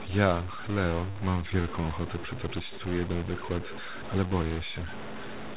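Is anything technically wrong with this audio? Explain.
Yes, two things. Through the whole clip there's an edge of noise and distortion on the speech, and the pauses aren't clean but carry a steady hiss. That fits a stuck bit, likely a data line or converter bit frozen at 0 or 1. About half the sample values end up shifted by that bit's weight, in a pattern that follows the waveform, which gives the grit. Near silence the bit flips with the sign of tiny values, so quiet stretches fill with noise.

From 1.14 to 1.66 s you get repeated stalls, a stutter. Packets came in late or slower than playback, so the jitter buffer kept running dry. Four times the receiver stretched the last bit of sound to cover the wait, about 43 ms in total, with the longest gap around 12 ms. Nothing is actually lost, but that half-second drags and hiccups. The band stops at 4 kHz, which fits the G.711 A-law call path rather than the damage.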